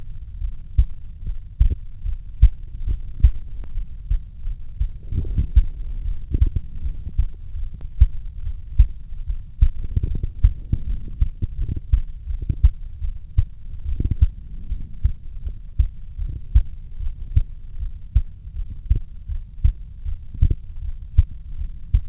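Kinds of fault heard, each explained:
No faults can be heard in the audio. It has come through a call path whose band stops at 4 kHz, with nothing above that, which fits a G.711 mu-law codec at 64 kbps.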